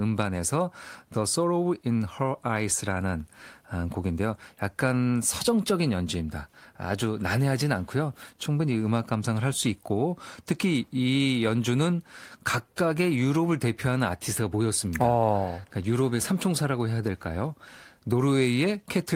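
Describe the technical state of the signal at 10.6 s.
At 10.6 s the signal is intact, with no dropout, distortion, glitch or other technical fault at that moment.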